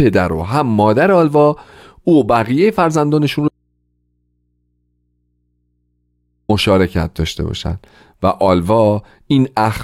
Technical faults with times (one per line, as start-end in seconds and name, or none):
3.48-6.49 audio dropout to a faint residue